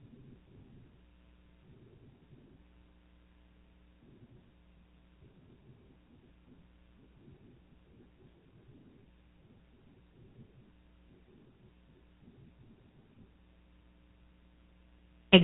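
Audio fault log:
throughout GSM full-rate codec: nothing above 4 kHz survives, and pulse-driven vocal-tract modelling leaves a plainly buzzy, gravelly roughness, fitting roughly 13 kbps.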